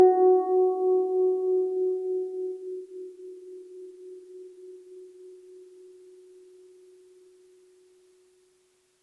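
No technical faults are audible.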